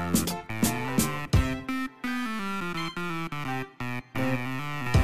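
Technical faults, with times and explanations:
Nothing technical stands out here, so there are no faults worth listing for this audio.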